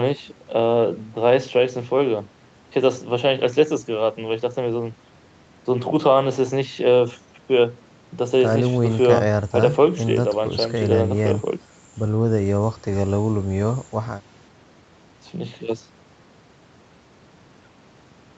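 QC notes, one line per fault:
Nothing to flag here, just speech coming through an ordinary call path, with the top end stopping at about 8 kHz as that call bandwidth would leave it.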